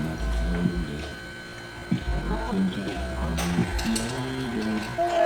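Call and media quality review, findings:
Time-stretched section from 1.05 s to the end: pace suddenly drops to about 0.72x while pitch holds steady. Slowed part drags, with no pitch sag to go with it. Likely cause is a time-stretch step in the media pipeline, padding the sound to fit a target length by repeating short slices rather than resampling. Worth checking whatever fits clip lengths upstream.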